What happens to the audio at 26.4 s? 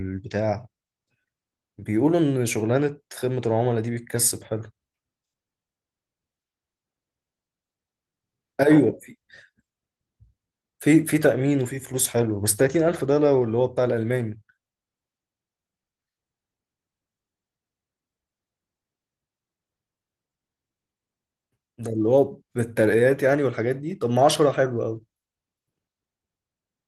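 Nothing goes wrong at 26.4 s: the speech continues intact there, carried through the Opus voice compression with only the light coding texture heard throughout.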